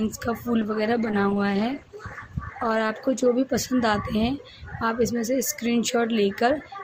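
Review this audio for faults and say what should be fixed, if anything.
From 0.62 to 3.35 s the sound turns rough and muffled, with highs lost: a call bitrate drop, fitting a fall from 64 to 14 kbps, coarsened encoding. Fix it by stabilising the network path and setting a higher minimum encoder bitrate so that brief bandwidth dips don't starve the codec.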